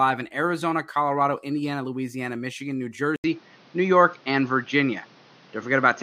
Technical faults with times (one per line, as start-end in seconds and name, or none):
3.16-6.03 input switched to a poorer device